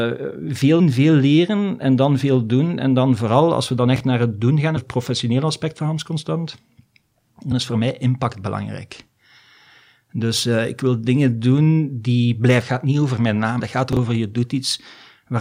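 At 0.79 s, right before "veel leren en dan", there's a brief glitch. That's damaged data in the compressed stream: the decoder loses sync and jumps ahead to the next good frame. From 3.96 to 4.00 s, between "vooral als we dan" and "naar het doen gaan", a 20 ms chunk plays one slot late. Those chunks out of order make a jumbled blip. The same glitch returns at 4.76, 7.51 (just before "is voor mij impact") and 13.59 s. The swap happens again from 13.93 to 13.97 s.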